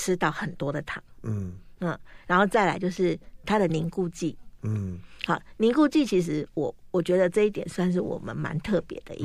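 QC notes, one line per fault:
5.74 s, dropped samples: a single sharp click in the speech, seen as a thin vertical line running up through the whole spectrum at one instant. The likely cause is a fraction of a millisecond of samples missing from the stream, so the waveform jumps straight from one value to a later one. Unlike a dropout, no audible stretch of sound goes missing and there is no gap or silence. The step alone makes the click.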